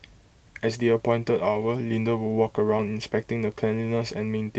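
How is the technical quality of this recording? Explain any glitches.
The recording has two brief glitches on Opus call audio, whose band stops near 8 kHz. Lost packet rebuilt from error correction, at 1.61–1.63 s and 2.77–2.79 s: each 20 ms stretch, consistent with one lost packet, was replayed from a low-bitrate backup copy, so there's no gap, just a momentary rough, noisier patch visible as smeared, grainier spectrogram texture.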